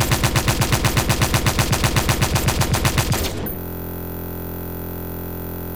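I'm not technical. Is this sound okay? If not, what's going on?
No. At 3.59 s the sound freezes into a system hang loop that lasts to the end of the clip. The computer stalled while the playback hardware kept replaying the same tiny slice of audio, just 23 ms long, which fits a 1024-sample buffer. Repeating about 43 times a second, it blurs into a steady buzz rather than a choppy stutter. Unlike dropouts or crackles, nothing goes silent: the same fragment repeats exactly, over and over.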